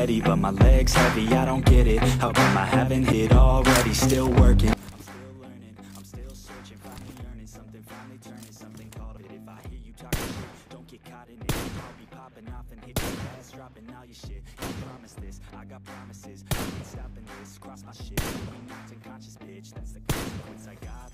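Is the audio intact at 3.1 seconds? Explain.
No. At 3.12 s there is a brief tick and a near-silent gap of only a few milliseconds, after which the sound resumes from a different point. This is a CD skip: a knock or disc flaw threw the laser onto another turn of the spiral.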